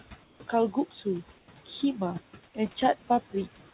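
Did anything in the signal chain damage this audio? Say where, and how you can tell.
Yes. Call processing left noise suppressor artifacts throughout. The background sinks by about 16 dB between phrases and swells under them.

Comfort noise replaces the background at 0.24 to 0.40 s and 1.38 to 1.48 s. It is steady, featureless, and about 2 to 3 dB quieter. Discontinuous transmission is the likely cause.

Speech is cut by the noise suppressor between 0.72 and 1.06 s. About a tenth of a second sounds swallowed, dipping by up to about 14 dB. The G.711 codec stops everything above 4 kHz.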